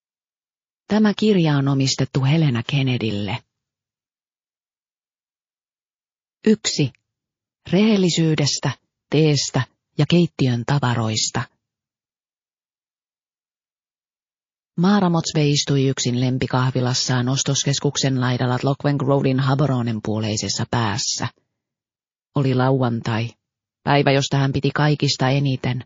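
Throughout the clip, heavy MP3 compression is the likely cause of the watery, swirling texture: starved of bits, which fits a rate near 32 kbps, the encoder cuts the treble and lets weak frequency lines flicker between frames, smearing attacks and adding metallic chirps.

From 2.65 to 2.69 s, pre-echo appears: the quantisation noise meant for a sharp attack spreads back through its long transform block, about 72 ms, rather than a short block. A hiss roughly 18 dB up comes 40 ms early, softening the onset.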